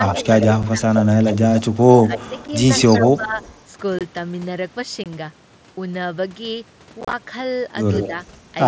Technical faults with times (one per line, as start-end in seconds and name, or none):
0.00-2.24 speech suppressed in double talk
0.07-3.61 echo leak
0.63 unconcealed Bluetooth headset packet loss
2.48 unconcealed Bluetooth headset packet loss
3.01-3.37 speech suppressed in double talk
3.99-4.01 unconcealed Bluetooth headset packet loss
5.04-5.06 unconcealed Bluetooth headset packet loss
7.01-7.13 unconcealed Bluetooth headset packet loss
8.00-8.08 echo leak
8.07-8.14 speech suppressed in double talk